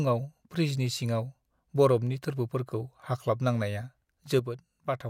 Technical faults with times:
4.39-5.09 one channel drops out

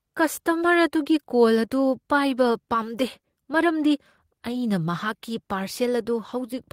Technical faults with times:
none

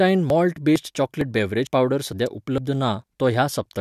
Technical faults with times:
0.30 audio missing between chunks
0.76 audio missing between chunks
1.21 audio missing between chunks
1.67 audio missing between chunks
2.12 audio missing between chunks
2.26 electrical switching spike
2.58 audio missing between chunks
3.04 audio missing between chunks

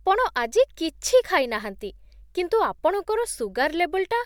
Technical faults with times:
none

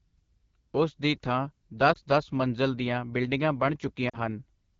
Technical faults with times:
0.00-4.80 AMR wideband (HD Voice) codec
1.93-1.98 lost AMR speech frames
4.09-4.18 lost AMR speech frames

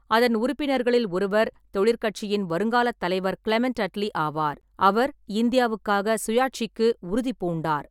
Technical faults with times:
none

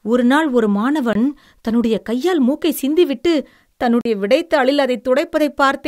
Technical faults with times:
1.13-1.15 block of digital silence
4.01-4.05 block of digital silence

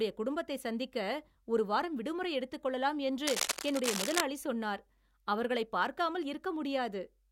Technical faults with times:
3.27-4.21 cable scratch noise

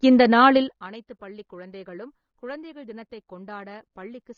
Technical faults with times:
0.00-4.37 AAC compression
0.56-0.88 zipper noise

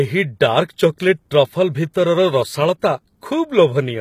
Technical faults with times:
0.00-4.01 HE-AAC compression

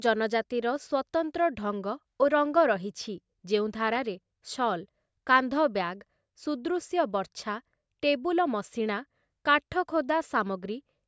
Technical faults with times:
none

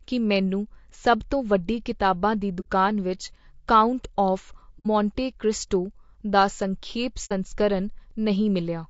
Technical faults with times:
0.00-8.89 low-delay AAC compression
2.60-2.67 AAC frame loss with muting
4.79-4.87 AAC frame loss with muting
7.25-7.32 AAC frame loss with muting

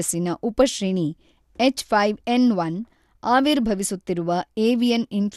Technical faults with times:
0.00-5.36 MP2 compression

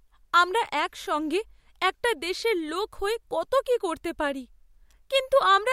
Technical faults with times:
none

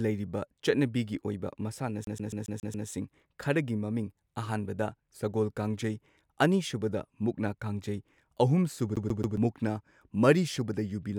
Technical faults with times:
2.04-2.88 CD stuck on one turn
8.96-9.37 CD stuck on one turn

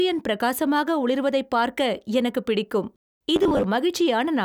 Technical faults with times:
3.36-3.66 robotic sound from repeated short buffers

